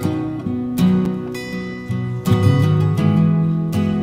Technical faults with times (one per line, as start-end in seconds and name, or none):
1.05 gap between stream segments